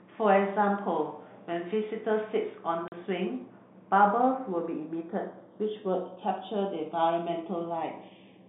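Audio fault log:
2.88 to 2.92 s, packet loss filled with silence: a 40 ms hole with hard edges cuts the speech, where lost packets, likely two at 20 ms each, were replaced by silence.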